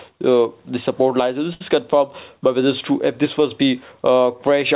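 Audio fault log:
1.54–1.62 s, burst of packet loss: about 60 ms never arrived, so concealment held and faded the last sound, leaving a smeared, dimming spectrogram patch below 4 kHz, then an abrupt waveform jump.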